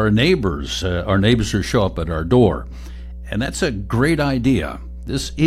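A ground loop or an unshielded path near a transformer has let the 60 Hz power line leak into the signal chain of this speech recording, producing mains hum that runs from start to finish. The result is a steady low drone at 60 Hz, with some low harmonics above it, sitting only around 15 dB below the speech. At that level it is plainly audible under every phrase and fills the pauses between them with a constant hum.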